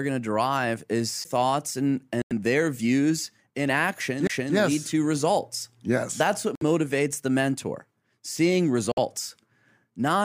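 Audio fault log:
1.24 s and 4.27 to 4.30 s, CD skip: each is a tiny tick with a very short mute, around 10 ms at the first and roughly 20 ms at the second, after which the speech carries on from a different point. This happens when the laser is knocked onto a neighbouring turn of the disc's spiral and resumes reading from there. The displaced continuation sets it apart from a Bluetooth stall.
2.22 to 2.33 s, 6.55 to 6.63 s and 8.92 to 8.99 s, Bluetooth stall: the speech drops to clean silence for about 91 ms, 59 ms and 55 ms, then picks up again. The likely cause is radio interference delaying packets, so the headphones' buffer ran empty and playback waited for the resent data. Unlike the CD skips, these are audible gaps of dead air with no tick, and they are longer than the skips' brief mutes.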